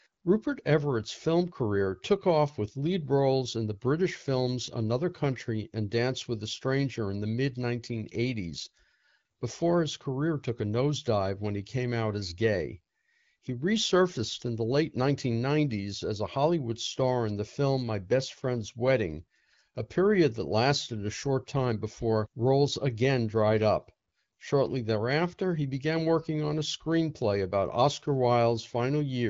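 No technical faults occur anywhere in this speech clip, which carries the band-limited sound of an AMR wideband (HD Voice) call at 12.65 kbit/s.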